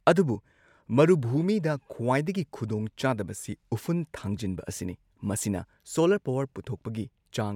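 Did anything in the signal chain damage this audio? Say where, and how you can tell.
No, nothing in the signal chain has damaged this speech recording. No stage, from capture through to playback, leaves any audible mark on it.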